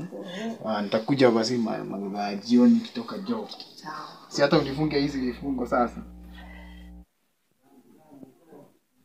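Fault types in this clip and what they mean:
Mains hum: Power-line energy leaks into the audio path through a ground loop or a nearby transformer. Here it is a steady 60 Hz drone from 4.51 to 7.05 s. It sits roughly 20 dB below the sound.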